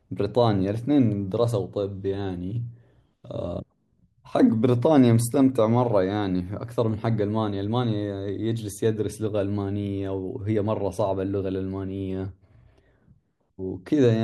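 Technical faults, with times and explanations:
No technical faults can be heard anywhere in this recording.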